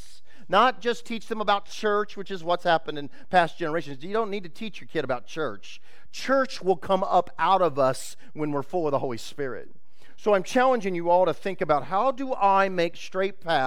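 A DC offset runs through the whole clip, from the first sample to the last: somewhere in the chain a constant voltage or numeric bias was added to the signal, so the entire waveform sits shifted off the zero line by about -33 dBFS. That shift is inaudible as a tone, but it eats into headroom on one side of the waveform and appears as a steady, unmoving component at 0 Hz at the very bottom of the spectrum.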